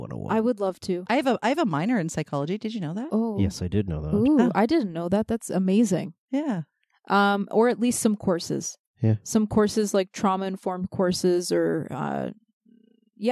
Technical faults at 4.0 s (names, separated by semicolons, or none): none